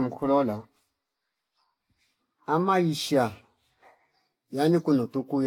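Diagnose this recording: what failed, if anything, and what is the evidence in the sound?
Throughout the speech there is a swirly, hollow smear, consonant attacks are blurred, and nothing sounds above 17.3 kHz. This is codec-stage generation loss, likely from around four lossy re-encodes, consistent with a Vorbis chain near 65 kbit/s, each pass quantising on a shifted frame grid.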